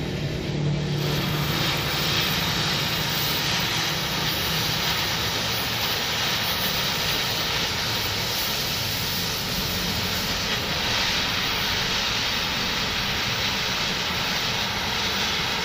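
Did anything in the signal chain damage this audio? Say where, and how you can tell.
Yes, at the codec stage: a Bluetooth SBC bit pool drop from 0.49 to 3.89 s. Treble dulls and gritty noise rises, fitting a bit pool cut from 31 to 14, near 99 kbps, starving top sub-bands. A spectrogram shows emptied upper bands over a grainy floor.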